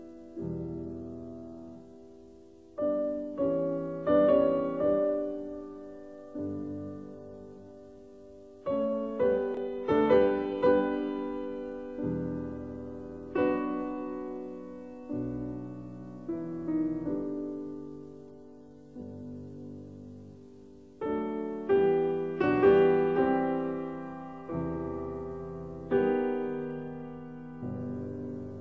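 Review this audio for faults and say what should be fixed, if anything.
Nothing stood out on listening, so there is nothing here that needs fixing.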